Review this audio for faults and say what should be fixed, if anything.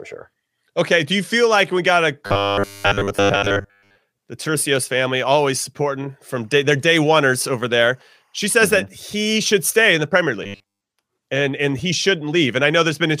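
From 2.27 to 3.98 s, after "like we got a", most of the audio turns into robotic sound from repeated short buffers. From 10.44 to 10.81 s, just before "and and he", all of it does. Both stretches carry a rigid 100 Hz buzz, which points to 10 ms chunks being replayed while new audio was late, likely a starved playback or capture buffer. A steady hum at that pitch would run throughout, but this buzz appears only within these stretches. Enlarging the buffer or reducing CPU load on the audio thread should prevent it.

From 6.32 to 8.78 s, between "family always supporting" and "that he should stay", timecode bleed adds a faint chirping warble, very low beneath the speech. It flips between tones near 1 kHz and 2 kHz, at a rhythm consistent with 24 fps timecode leaking in. A single whine or tone would hold one pitch, while this one toggles between two. Keeping timecode on separate, well-shielded cables and isolated tracks should stop the leak.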